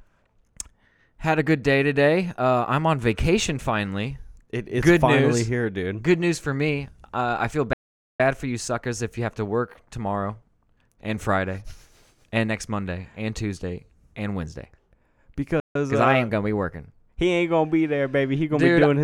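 At 7.73 s the speech cuts to silence right after "I feel". It stays dead for about 0.46 s and resumes at 8.20 s with "for you suckers if". This is a playback stall. The output simply stops mid-flow, likely because the player ran short of data or its thread was blocked. A second, shorter stall runs from 15.60 s to 15.75 s, about 0.15 s of silence. The speech then picks up with "uh I ain't gonna".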